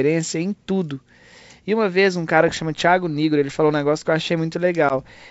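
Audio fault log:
4.89–4.93 s, packet loss on an ADPCM call: a hard-edged 10 ms hole, about one packet. The G.722 decoder's predictor then briefly mistracks, so the sound comes back slightly off before settling.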